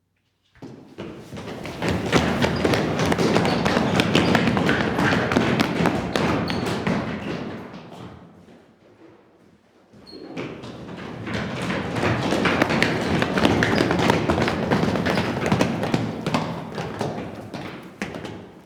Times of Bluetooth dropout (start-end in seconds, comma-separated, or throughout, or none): none